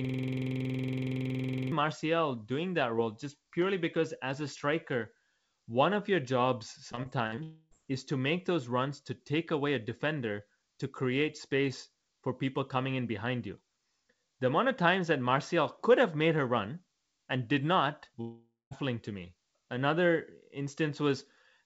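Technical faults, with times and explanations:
0.00–1.72 s, system hang loop: already under way at the start, a 46 ms slice repeats about 36 times, a machine-gun stutter at 21.5 Hz, consistent with a frozen 2048-sample ring buffer.
6.92–7.39 s, repeated packet loss (robotic sound): five gaps, the longest 48 ms, each patched by stretching the last sound, giving choppy audio with about 120 ms missing.
7.43–7.73 s, long network dropout: a fading continuation of the last sound fills nearly 280 ms before brief silence, likely from audio that never arrived.
18.21–18.73 s, long network dropout: about 500 ms lost, masked by a fading continuation of the last sound ending in roughly 200 ms of silence, likely an interrupted stream.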